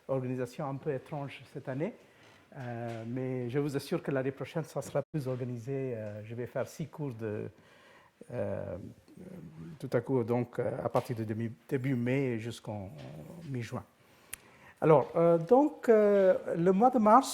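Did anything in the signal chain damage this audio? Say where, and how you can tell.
Yes. A digital broadcast dropout at the receiving and decoding stage mutes the sound from 5.02 to 5.16 s. The level fades out over about 20 ms into silence. About 96 ms of programme is simply missing, which fits three lost frames of roughly 32 ms each. Frames that failed their checks were discarded and the decoder muted until valid data resumed. An analogue cable fault would crackle or hum, and network packet concealment would smear or repeat sound. This is a clean, faded gap instead.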